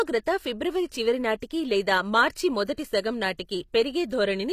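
From start to finish, the speech carries plainly audible codec damage, likely from HE-AAC compression. Nothing is present above 14.9 kHz. The treble is rebuilt rather than real. Spectral band replication copies lower bands upward and shapes them with a rough envelope. Harmonics fail to line up across the crossover. S sounds turn gritty, lispy and metallic. The damage fits a low bitrate, around 24 kbps.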